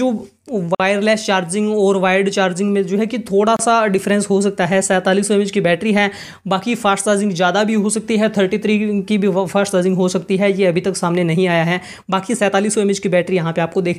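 A gap at a join of encoded pieces opens at 0.75 s, a silence of about 49 ms, and again at 3.57 s, lasting about 28 ms. Both times the continuous sound drops out and then resumes exactly where it left off. The pieces were encoded separately and butted together, so each one's leading encoder delay and padded final frame stayed in. The codec softens the hard edges of each dropout.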